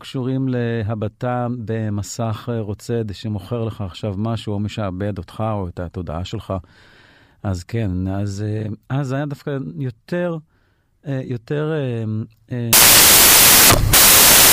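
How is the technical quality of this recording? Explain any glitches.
The recording has one serious glitch at its end. From 12.73 s to 14.53 s the samples are built from the wrong bytes: the reader misaligns or swaps each sample's bytes, so the rapidly varying low bits dominate and the speech turns into loud, harsh broadband noise.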